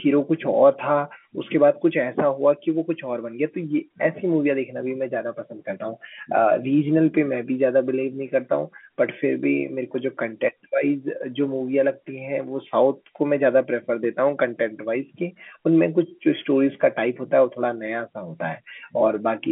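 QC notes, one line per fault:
Nothing stood out on listening to this speech, which comes over a standard fixed-line telephone channel with its usual narrow band topping out below 4 kHz.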